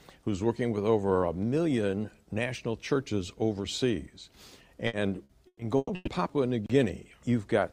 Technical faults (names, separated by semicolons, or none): repeated packet loss (robotic sound)